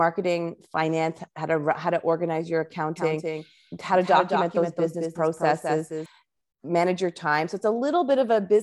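From 2.96 to 6.06 s, after "how to organize your", there's a doubled audio track: a clean copy trailing about a fifth of a second behind, somewhat quieter, likely from a second, slower capture path.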